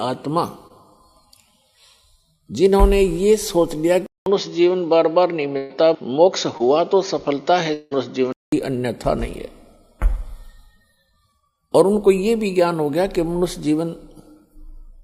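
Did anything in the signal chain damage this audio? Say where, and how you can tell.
Yes. Brief smears at 0.67 to 0.72 s and 6.58 to 6.61 s are short concealed packet loss: about 20 ms never arrived, and the decoder extended the preceding sound to cover it.

From 4.06 to 8.52 s the sound turns dull, with nothing above 6.8 kHz, a faint new noise floor and a 200 ms silence at onset. The input likely switched to a poorer device.

At 5.57 to 5.72 s a held, fading stretch replaces 120 ms of audio, which then resumes further on. This is a burst of packet loss on the network, concealed by extrapolation.

Around 7.73 to 7.93 s the sound is held and fades for roughly 180 ms before returning past the missing portion, likely a long network dropout in concealment.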